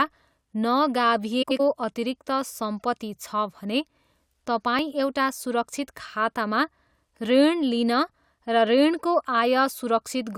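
From 1.42 to 1.60 s the speech turns into a brief garbled flutter because of frames out of order. Two neighbouring blocks of about 85 ms each, which fits runs of four frames, were decoded in swapped order, so the stretch plays its second half before its first. No time is lost. On a waveform the envelope jumps abruptly at each seam, and a spectrogram shows harmonic tracks breaking and restarting out of sequence.

At 4.79 s the speech makes a slight jump in the sound, with no gap of silence. This is likely a dropped buffer (overrun): the samples weren't collected before the hardware overwrote them, so roughly 10 ms went missing and the two sides were butted together. The waveform shows a sudden discontinuity at that instant, and the spectrogram shows a thin vertical broadband line.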